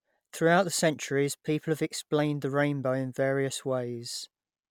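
Throughout the speech there is generation loss, most likely from the audio being run through an MP3 encoder about three times, each pass near 135 kbit/s. Every re-encode quantises again on a shifted frame grid, so the noise and spectral gaps build on one another. The result sounds swirly and hollow, more smeared than a single MP3 at that rate would sound. Consonant onsets are softened, and nothing remains above 19.9 kHz.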